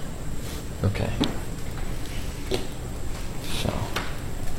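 At 1.40 to 1.45 s, damaged data in the compressed stream makes the decoder lose sync, giving a brief chirp, squawk, click or short hole.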